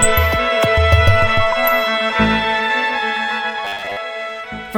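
From 3.65 to 3.97 s the sound collapses into a rigid, metallic buzz at 100 Hz, the classic robotic sound from repeated short buffers. It's likely starved input, with a 10 ms slice looped to fill gaps so most real audio there gets skipped.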